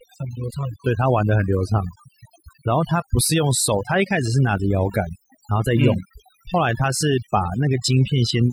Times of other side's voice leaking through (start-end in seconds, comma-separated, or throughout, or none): none